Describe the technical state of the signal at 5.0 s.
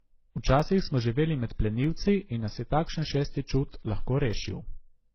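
At 5.0 s, as throughout the clip, the speech sounds dull, with a lowered top end and several kinds of coding grit layered together. This is likely transcoding between lossy codecs: each stage re-encoded the previous stage's artefacts, fitting a low-rate MP3 passed through WMA and then HE-AAC.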